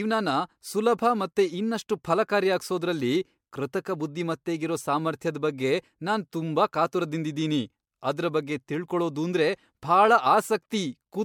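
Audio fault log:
throughout: generation loss. The speech has a swirly, hollow, smeared character, with consonant attacks blurring, and there's nothing above 19.9 kHz. The cause is likely repeated MP3 encoding, a few passes at something around 96 kbit/s by the sound of it. Each re-encode quantises again on a shifted frame grid, so the noise and spectral holes stack up, and it ends up sounding worse than a single pass at that rate would.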